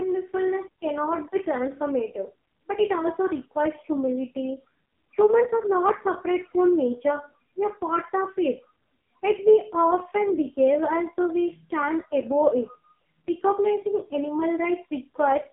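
Speech carrying heavy AMR narrowband mobile codec damage throughout: buzzy, synthetic tone fits its lowest 4.75 kbps mode; a spectrogram shows energy only between 150 Hz and 3.6 kHz, nothing above 3.8 kHz.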